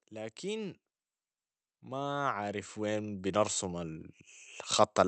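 From 1.67 s to 4.07 s, automatic gain rising can be heard. The gain control judged the input too quiet and turned itself up slowly. Speech and background swell together by about 8 dB over 2.4 s. The call-path coding sounds band-limited near 8 kHz.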